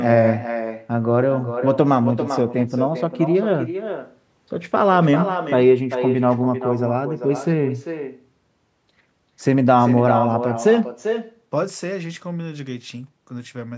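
From start to finish, the speech is trailed by a quieter, thinner copy of itself arriving roughly 0.4 s later, sitting about 8 dB below the direct sound. This is echo with no canceller: the far end played the call through a loudspeaker, its microphone captured it, and nothing stripped it out before it returned over the network. The call's microphone processing, with nothing above 8 kHz, is heard alongside it.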